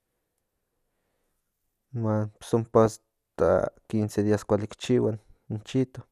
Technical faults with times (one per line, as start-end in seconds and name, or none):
2.86-2.97 DAB burbling
5.69-5.73 DAB burbling